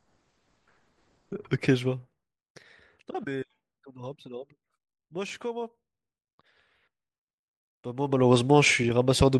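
Nothing stood out on listening to this speech recording.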